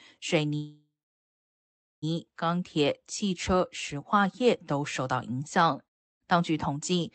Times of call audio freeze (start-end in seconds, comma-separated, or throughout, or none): 0.55-2.04